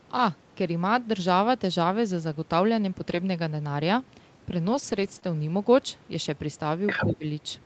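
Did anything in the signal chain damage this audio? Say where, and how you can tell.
Yes. At the network stage, error correction rebuilt lost packets at 3.09 s and from 4.67 to 5.17 s; those stretches turn rough and noisy but never gap, unlike concealment.

At 5.19 s, a short concealed packet loss smears about 20 ms of sound. The receiver extrapolated the last audio, so it wobbles briefly rather than sounding coarse.

From 6.86 to 7.13 s the other side's voice leaks through, only slightly quieter than the talker. This is likely residual loudspeaker echo the call processing's canceller missed.

From 6.99 to 7.24 s the talker's speech is suppressed in double talk, dipping by roughly 15 dB. The likely cause is the echo canceller ducking both voices during overlap, not packet loss.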